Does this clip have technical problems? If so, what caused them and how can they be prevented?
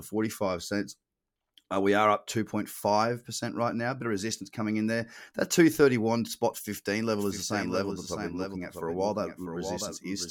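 Yes. From 7.16 s to the end, a doubled audio track appears, likely because a second, slower capture path or a misaligned edit mixed the speech in twice: a full-band copy about 5 dB quieter trails roughly 0.7 s behind, starting abruptly with no decay or room colour. Monitoring only one capture path and checking edits for overlapping copies prevents this.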